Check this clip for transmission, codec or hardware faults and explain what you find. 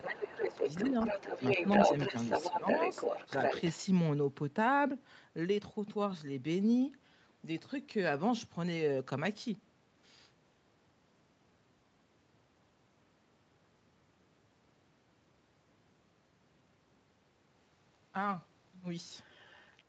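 Two echo-canceller faults appear, both clustered at the edges of the clip: speech suppressed in double talk, and the other side's voice leaking through.

Speech suppressed in double talk occurs from 0.0 to 0.65 s, 0.90 to 0.95 s, 2.10 to 2.14 s and 2.51 to 2.67 s. With both parties talking, the canceller likely misjudged the near talker as echo and attenuated everything. The voice dips by roughly 10 dB at first, then about 5 dB. The waveform shows brief notches in the envelope, and the spectrogram shows short vertical fades.

The other side's voice leaking through runs from 0.03 to 3.78 s and from 19.14 s to the end. A second voice sits at about the same level as the talker, likely residual loudspeaker echo the canceller failed to remove. On a spectrogram, a second set of harmonic striations overlaps the main voice's.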